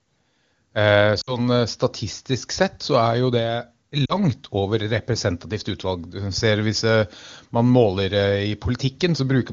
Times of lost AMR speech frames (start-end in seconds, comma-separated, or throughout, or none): 1.21-1.39, 4.06-4.15